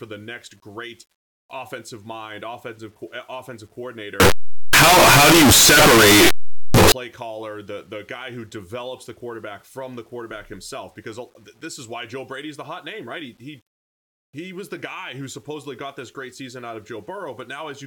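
A speech clip where, from 4.2 to 6.92 s, between "eh offensive" and "caller the the guy", the sound becomes very loud, harsh distortion, quiet parts as loud as the rest. Signed and unsigned mixed up in the 8-bit samples is the likely cause: the flipped top bit makes each zero crossing jump full range.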